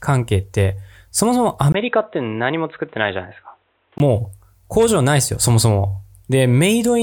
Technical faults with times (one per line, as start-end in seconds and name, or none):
1.72-4.00 input switched to a poorer device